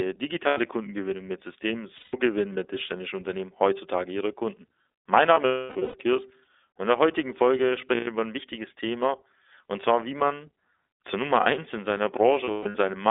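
Speech runs through a narrow, boxy band of roughly 300 Hz to 3.6 kHz with nothing above, and it sounds clear but plainly rough and slightly synthetic throughout. This is the iLBC codec. It codes each short frame's excitation on its own, and its 30 ms framing fits the 13.33 kbps mode. Five times the sound freezes into a held, buzzy or breathy vowel-like tone and then snaps back almost at once. This happens at 0.47 s for about 90 ms, at 1.98 s for about 150 ms, between 5.34 and 5.95 s, at 7.95 s for about 120 ms, and between 12.45 and 12.75 s. The 5.34 s stretch is broken up, with about 450 ms missing across 600 ms and the longest hold near 300 ms. The 12.45 s stretch has 240 ms missing across 300 ms. These are lost iLBC frames. The decoder repeats the last pitch cycle mixed with noise, which fades on the longer holds, and recovers quickly because each frame stands alone.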